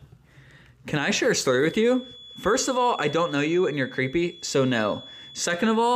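From 1.52 s to the end at 5.96 s, a feedback whistle sits behind the sound. It is a thin, steady tone near 3.4 kHz. It stays well below the main signal, roughly 20 dB down, and its level swells and fades slowly. The likely cause is a loudspeaker-to-microphone loop held just at the edge of feedback. One frequency keeps ringing without building up. It never runs away into a howl.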